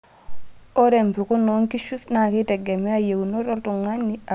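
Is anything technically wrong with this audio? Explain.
No, nothing technically wrong can be heard in this speech recording. There is no fault to explain.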